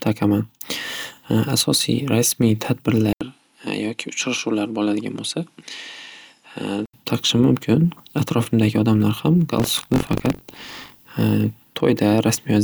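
From 3.13 to 6.94 s, the input was likely switched mid-recording to a poorer device, such as a second microphone or a headset's call profile. The speech goes silent for 80 ms at the switch, then returns a few decibels quieter and duller. A new background noise sits well below the speech, roughly 45 dB down. At 6.94 s the fuller, brighter sound comes back.

From 9.58 to 11.08 s, buffer tearing occurs. The program writing the ring buffer and the hardware reading it have drifted out of step, so they cross inside every period. About a tenth of each buffer carries audio from roughly 40 ms earlier, spliced in with hard joins on either side. The result is a robotic buzz at 46.9 Hz that rides on the speech only while sound is present, which fits a 1024-sample buffer.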